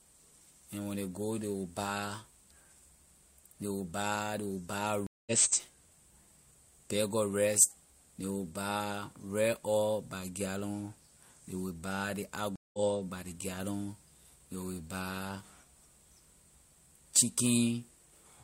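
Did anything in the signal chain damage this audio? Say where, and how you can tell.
Yes. Network/playback stage: two stream reconnects, at 5.07 to 5.32 s after "buy ley will buy" (about 200 ms silence) and 12.56 to 12.79 s after "ley will buy ley" (178 ms), resuming at "by ley gallon". Each time the connection dropped, a fresh decoder restarted mid-stream, and audio picks up roughly 0.2 s later, skipping material.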